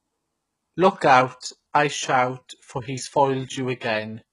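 HE-AAC compression damage runs through this entire speech clip: s sounds turn gritty and metallic, and nothing sounds above 11.1 kHz. The likely cause is spectral band replication at a very low bitrate, near 12 kbps, copying lower harmonics upward where they fail to line up.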